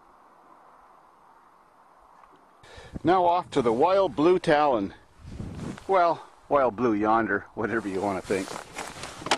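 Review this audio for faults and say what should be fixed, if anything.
No technical faults can be heard anywhere in the clip. Nothing needs to be fixed.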